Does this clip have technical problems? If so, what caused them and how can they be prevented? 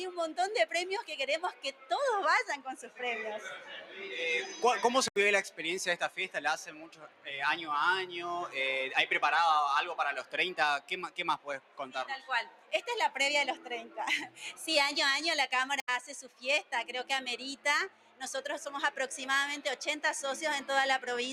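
Yes. A noise suppressor designed for speech was applied to music or sounds, and it stays active for the whole clip. It treats sustained tones, ambience and decay tails as noise and pulls them down by around 10 dB, while onsets pass largely intact. The level pumps and the sound thins between attacks. Prevention: bypass or disable speech noise suppression whenever the source is music or non-speech sound.

In eight places the suppressor cuts the sound deeper: 1.52–1.91 s, 2.81–3.01 s, 3.56–4.0 s, 5.5–7.27 s, 10.23–12.73 s, 13.56–14.41 s, 16.25–16.72 s and 17.56–18.21 s. The deepest drops are about 9 to 11 dB. Held or fading material sinks and its decay is truncated, and the longest stretches, near 5.5 s and 10.2 s, lose a second or so of sustained sound. Prevention: turn the suppressor off for this content, or at least reduce its maximum attenuation.

There is a block of digital silence at 5.08–5.16 s and another at 15.8–15.88 s, each 80 ms long. 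The signal drops abruptly to silence and returns with no fade. This points to the processing chain failing to deliver an output buffer in time. Prevention: increase the audio buffer size or lower the processing load so every block is filled before its deadline.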